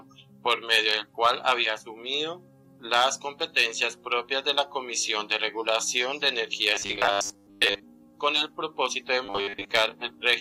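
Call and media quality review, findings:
Robotic sound from repeated short buffers, 6.75–7.84 s and 9.26–9.71 s. Rigid metallic buzz at 100 Hz, consistent with a 10 ms block replayed in place of missing audio. Most of the real signal skipped. Likely jitter buffer underrun or concealment loop. Spectrogram: evenly spaced harmonic lines at 100 Hz multiples. Waveform: repeated 10 ms cycles across much of each span, envelope only loosely following the surrounding sound.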